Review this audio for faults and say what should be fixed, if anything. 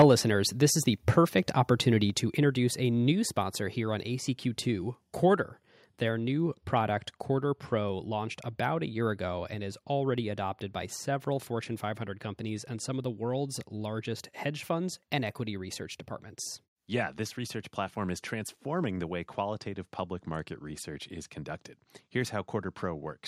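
Microphone overload at 0.00 to 0.02 s: peaks run about 4 dB past the converter's limit, flattening roughly a fifth of samples, likely from excessive input gain; waveform tops look squared, with broadband smearing on a spectrogram.

Microphone volume stepped down at 0.02 s (before "listeners this is the"), 2.1 s (between "this is the perfect" and "to introduce a") and 3.12 s (between "to introduce a" and "sponsor here on"): each an abrupt drop of about 3 dB, likely automatic gain control reacting to the clipping; the waveform envelope shrinks in one step.

To prevent both, set the microphone's input level lower with headroom and disable the call software's automatic gain adjustment.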